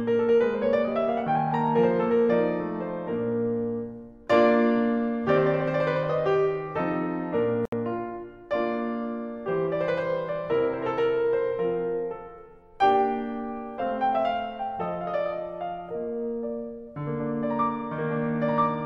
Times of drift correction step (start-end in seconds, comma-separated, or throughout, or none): none